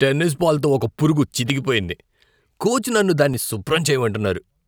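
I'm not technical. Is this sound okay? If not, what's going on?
No. Regular clicks tick through the speech about every 0.92 seconds from 0.58 to 4.25 s. These are clock drift buffer slips, likely from two devices' clocks disagreeing. Their steady spacing sets them apart from random glitches.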